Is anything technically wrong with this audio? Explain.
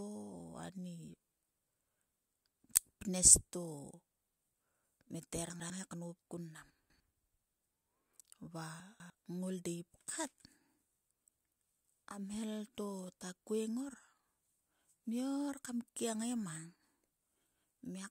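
Yes, chunks out of order at 5.5 to 5.7 s, 6.7 to 7.0 s and 8.8 to 9.1 s in this speech. A 100 ms piece lands one or two chunks late, so the sound jumbles briefly at the hard joins.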